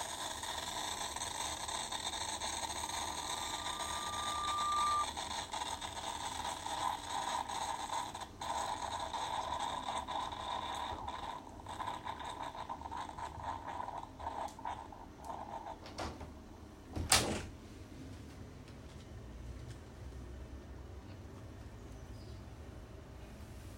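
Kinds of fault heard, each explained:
Loudspeaker feedback squeal: the microphone picked up its own loudspeaker, so a 1.2 kHz tone grew over about two seconds into a squeal well above the sound.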